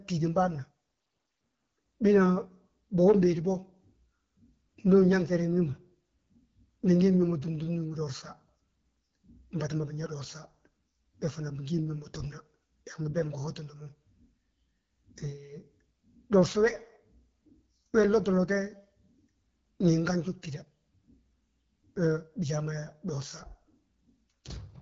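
From start to end, the speech carries AMR wideband (HD Voice) codec damage. Nothing reaches above 7 kHz. A pulse-driven vocal tract model rebuilds the band, with shaped noise on top. The rough rasp is plainly audible, which fits an 8.85 kbit/s mode.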